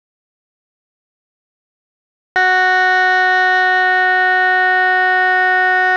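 The audio input was likely lost, through a disconnected device or failed link, while recording continued, so an audio dropout to silence fills the opening: from the start to 2.36 s there is silence with no room tone, and the music then enters abruptly mid-flow.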